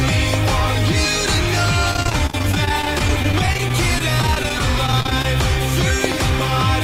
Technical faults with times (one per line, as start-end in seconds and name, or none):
0.34-0.50 loud pop
1.91-5.25 repeated packet loss (robotic sound)
6.04-6.14 loud pop